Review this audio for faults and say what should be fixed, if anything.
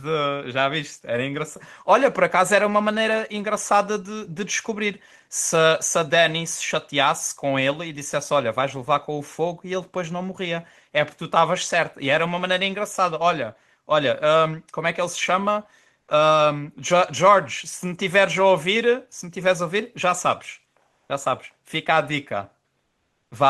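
Comfort noise in place of the background occurs at 20.85–21.09 s and 22.83–23.31 s. The room tone becomes even, featureless hiss, about 3 dB quieter the second time, likely from Opus DTX pausing the sender. A spectrogram shows a smooth, textureless wash, and the waveform shows flat, uniform noise. Turning off DTX at the sending encoder prevents it.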